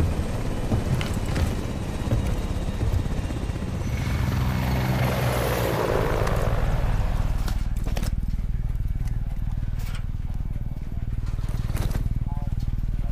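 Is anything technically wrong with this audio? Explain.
No, nothing technically wrong can be heard in this audio. It comes across as intact, with no audible faults anywhere in it.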